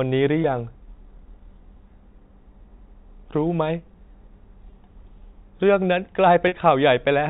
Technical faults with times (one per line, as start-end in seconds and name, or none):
0.42-0.44 packet loss with pitch repetition
4.70-4.72 packet loss with pitch repetition
6.48-6.52 packet loss with pitch repetition